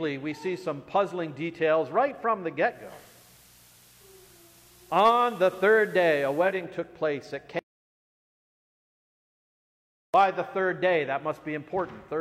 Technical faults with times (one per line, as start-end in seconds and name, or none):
2.65-6.69 digital radio blending to analogue
7.59-10.14 audio dropout to silence